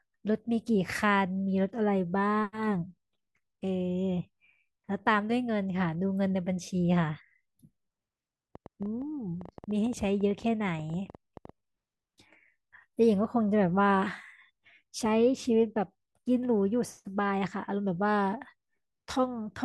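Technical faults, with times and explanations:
8.55 to 11.50 s, train of clicks: for roughly three seconds a run of short, similar pulses ticks over the speech, arriving at about 8.5 per second but unevenly spaced, some thirty in all. They reach about the level of the speech itself, in the gaps between syllables as well as over them. The uneven pace and much-the-same shape point to something outside the voice, likely electrical interference or a faulty connection or power supply.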